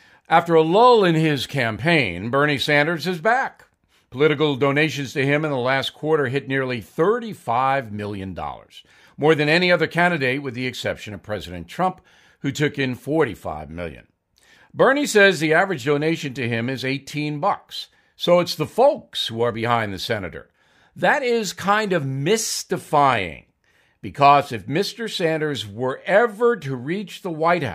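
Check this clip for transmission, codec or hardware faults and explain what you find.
No transmission, codec or hardware faults are audible anywhere in the speech.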